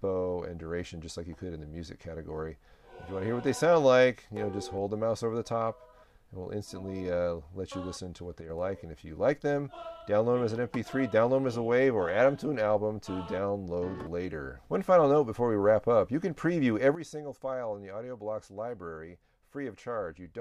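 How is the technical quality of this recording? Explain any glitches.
The recording has two sudden gain jumps. At 8.41 s the level drops by about 6 dB for under a tenth of a second, then returns at 8.50 s. At 16.95 s it falls by about 12 dB and stays down to the end. The sound and the background noise shift together, with no fade. The likely cause is a digital gain change applied between two samples without a ramp. Each step can leave a click.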